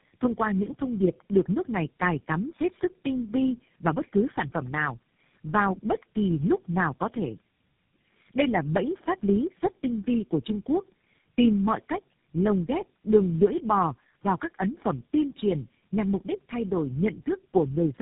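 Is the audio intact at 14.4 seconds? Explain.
No. At 14.4 s, as throughout, tandem speech coding applies: four speech codecs in a row, ending with GSM full rate, each re-encoded the last one's damage. The speech sounds rough, muffled and warbly, with nothing above 3.8 kHz.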